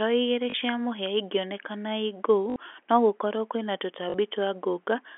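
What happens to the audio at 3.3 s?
Nothing goes wrong at 3.3 s: the speech carries on intact through the narrowband telephone channel, with no dropout, click or distortion at that point.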